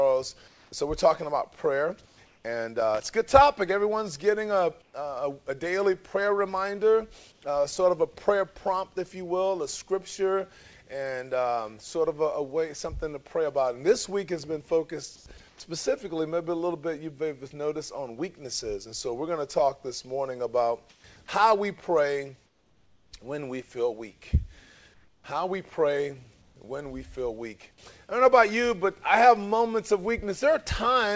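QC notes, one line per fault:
0.48–2.44 s, 4.82–4.94 s, 7.32–7.42 s, 15.16–15.60 s, 20.90–26.56 s: comfort noise in place of the background. In these pauses the real background gives way to a steady, featureless hiss, about 1 to 2 dB quieter in the short gaps at 4.82 s and 7.32 s. The likely cause is discontinuous transmission, with the receiver synthesising noise while the sender stayed silent.
2.80–3.13 s: loose connector crackle. An irregular burst of scratchy crackle lasts about a third of a second. A worn or dirty contact making and breaking as it moved would chop the signal this way and add pops from any DC on the line.
15.58 s: onset clipped by the voice detector. Sound resumes abruptly out of the comfort noise, with about 20 ms of its soft beginning missing. The likely cause is a voice detector slow to register the restart, so those first moments were never sent.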